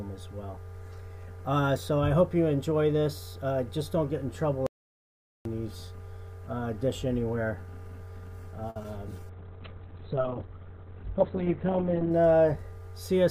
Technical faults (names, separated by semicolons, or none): audio dropout to silence; short stall from a late packet; short concealed packet loss; call bitrate drop